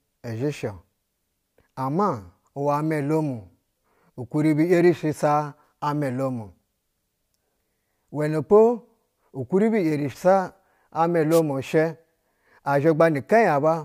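At 11.30 to 11.41 s a wireless microphone noise hit occurs: the FM radio link fades briefly, and receiver noise surfaces as a short burst of static over the speech.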